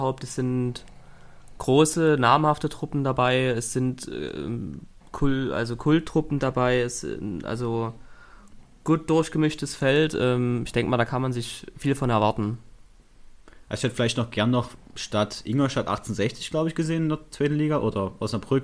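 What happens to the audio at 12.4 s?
Nothing goes wrong at 12.4 s; the audio plays through that moment intact, with no dropout, click or distortion.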